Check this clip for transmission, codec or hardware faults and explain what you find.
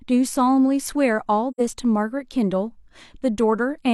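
One codec fault is present in this speech clip: AAC frame loss with muting, from 1.51 to 1.61 s. Part of the coded stream failed to arrive, and the decoder zeroed the spectrum for the missing span rather than attempting to conceal it. The gap lasts about 85 ms, which fits two lost AAC frames. Because the transform windows overlap, the signal fades out into silence and fades back in, leaving a brief, soft-edged hole in the speech.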